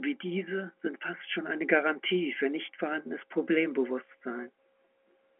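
No faults are audible in this speech; it sits within the 150 Hz to 3.4 kHz band of G.711 A-law telephone coding at 64 kbps.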